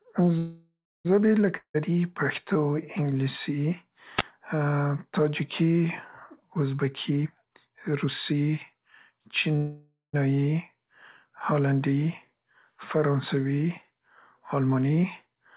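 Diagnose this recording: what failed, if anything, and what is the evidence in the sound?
Network, receive side: call audio freeze. Packets were likely held up in transit and the jitter buffer ran dry at 0.38–1.07 s and again at 9.56–10.15 s. The last sound carries on as a fading buzz, ending in silence for about 0.29 s and 0.17 s. The speech then resumes intact but later, about 0.67 s and 0.58 s respectively.

Network, receive side: long network dropout. From 1.57 to 1.76 s audio most likely stopped arriving altogether. A decaying buzz covers the hole and gives way to about 0.09 s of silence. Speech picks up again at "پښتو انګلیسي" with about 0.18 s permanently gone.

Analogue radio link: wireless microphone noise hit. Just after "پښتو انګلیسي", at 4.16–4.23 s, the FM microphone's signal faded as reflections cancelled. Receiver noise surged into a brief swish of static over the narrowband speech, which carries nothing above 4 kHz.

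Call processing: jitter buffer speed-up. The buffer held more audio than its target, so the receiver trimmed pitch-period slices repeatedly. From 6.84 to 9.49 s speech runs at 117 % speed, roughly half a second removed. From 14.46 to 15.27 s it runs at 109 %, a few hundredths removed. Both passages sound hurried at unchanged pitch.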